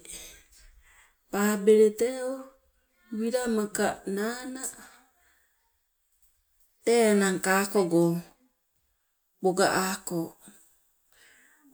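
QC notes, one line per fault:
No faults turn up here; it's fine to tick this one off and carry on to the next clip.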